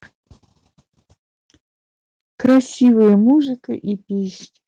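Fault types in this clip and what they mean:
Microphone overload: from 2.44 to 3.31 s, speech peaks are flattened roughly 6 dB past the converter's limit, giving a harsh crackle, likely from excessive input gain.
Microphone volume stepped down: level drops abruptly, about 2 dB at 2.46 s and about 7 dB at 3.45 s, likely automatic gain reacting to clipping.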